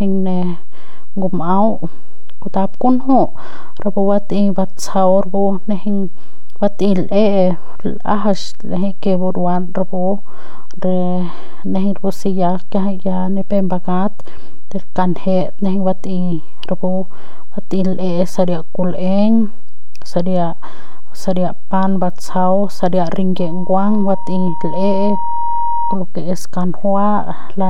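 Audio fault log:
Throughout: DC offset. The entire speech waveform sits displaced from zero by a constant of about -10 dBFS. This shift is inaudible in itself, since a fixed offset carries no changing pressure, but it shows up as steady energy at 0 Hz at the bottom of the spectrum. It also eats into headroom, so peaks on one side of the waveform have less room than they would if the signal were centred.
23.38 to 25.97 s: Loudspeaker feedback squeal. A single tone at 940 Hz emerges and climbs over roughly two seconds until it sits at about the same level as the speech, then stops at 25.97 s. The microphone is picking up the loudspeaker it drives, and at 940 Hz the loop gain exceeds one, so that frequency reinforces itself on each pass and swells into a howl.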